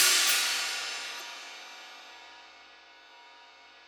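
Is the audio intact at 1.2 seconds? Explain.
No. From 1.16 to 1.22 s there is damaged data in a compressed stream: a short run of the encoded stream was corrupted, so the decoder misread or rejected the frames in that region, lost its place, and had to hunt for the next valid frame header before resuming. For roughly 60 ms the sound breaks into a brief chirp or squawk, and playback then picks up again after the damaged stretch.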